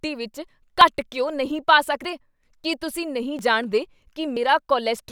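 At 0.81 s, just before "ਘਿਓ ਨਹੀਂ ਪਾ", the speech skips ahead by about 20 ms, the mark of a dropped buffer (overrun). The same happens at 2.04 s before "ਕੀ ਤੁਸੀਂ ਨਹੀਂ ਜਾਣਦੇ" (about 50 ms lost), at 3.39 s after "ਕੀ ਤੁਸੀਂ ਨਹੀਂ" (about 20 ms), and at 4.37 s (about 70 ms). The likely cause is that the samples weren't collected before being overwritten. Unlike a dropout, no silent gap is heard. The joined edges produce a sudden jump in the speech.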